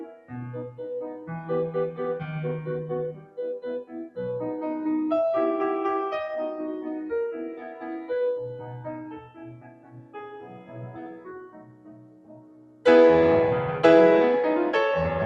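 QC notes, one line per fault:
Throughout: noise suppressor applied to music. A suppressor built for speech stays active across this music and reads sustained tones, ambience and reverb as noise, pulling them down while attacks slip through. Its gain swings by around 15 dB, so held material pumps and thins as the processor keeps changing its mind about what counts as signal, and tails collapse early instead of decaying naturally.
0.04–0.31 s, 3.13–3.39 s, 3.83–4.18 s, 7.51–7.85 s, 8.56–8.71 s, 9.0–12.85 s: sound cut by the noise suppressor. In each stretch the suppressor clamps down on steady or fading material harder than elsewhere, dropping it by about 13 dB, 14 dB, 13 dB, 6 dB, 5 dB and 14 dB respectively. The long 9.0–12.85 s span sinks for nearly four seconds, heard as a hollowed, receding passage, while the short dips near 7.5 and 8.6 s are milder dents.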